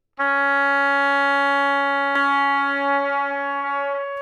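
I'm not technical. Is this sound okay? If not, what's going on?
No, it isn't. From about 2.16 seconds to the end, you hear a doubled audio track. A second copy of the same sound plays roughly 0.7 seconds behind the first, at about the same loudness. It cuts in suddenly. It has no fading tail and no room sound, so it doesn't sound like a natural echo. The likely cause is the sound being recorded twice, once through a slower route, or an edit leaving two copies out of step.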